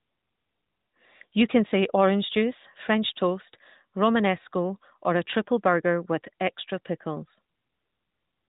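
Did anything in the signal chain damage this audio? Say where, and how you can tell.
No, nothing in the signal chain damaged this audio.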